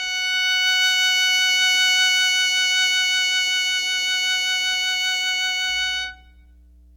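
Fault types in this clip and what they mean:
Mains hum: a steady low tone at 60 Hz, sitting about 30 dB below the music, enters at 5.70 s and runs to the end of the clip, the sign of power-line current leaking into the signal path through a ground loop or a nearby transformer.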